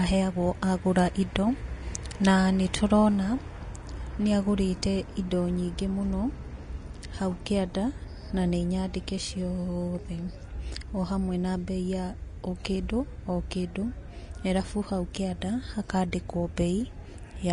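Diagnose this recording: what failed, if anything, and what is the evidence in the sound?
The codec stage is where this one went wrong. The whole speech clip carries plainly audible damage that sounds like Vorbis compression, likely run at a low setting, something in the region of 34 kbps. There's nothing at all above 10.6 kHz, and the treble just under that cut-off has turned into a hissy, grainy wash. That happens when the residue sitting on the spectral floor is quantised so coarsely that detail gets swapped for noise of similar energy, which also roughens tones and smears attacks.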